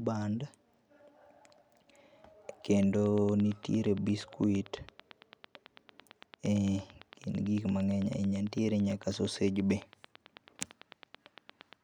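From 2.83 s to 11.74 s, a train of clicks ticks steadily at 8.9 per second. The clicks peak above the speech. Likely interference.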